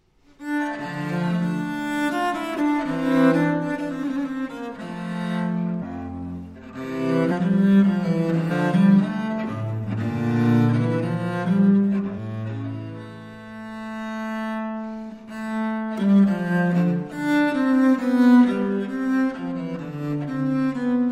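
You'll hear compressed frames skipped five times: at 5.78 to 5.83 s, 7.28 to 7.32 s, 8.47 to 8.52 s, 12.14 to 12.18 s and 17.09 to 17.13 s. Chunks of the compressed stream never got decoded, so the audio lurches ahead, losing about 200 ms, then 300, 300, 200 and 100 ms. Those jumps fit whole 42.7 ms frames.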